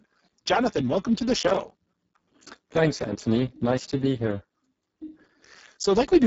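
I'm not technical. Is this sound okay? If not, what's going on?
No. Throughout, the Speex codec, an older voice-chat compressor, is squeezing this speech very hard. It keeps too little detail, so voices sound hoarse and noisy, and the top end above about 7.7 kHz is simply missing.

From 1.40 to 2.34 s, just after "welcome to the", there's processor overload crackle. The computer fell behind and missed dozens of tiny audio deadlines in a row, each leaving a brief hard-edged silent gap, which fits buffers of around 5 ms. Together they sound like gritty tearing.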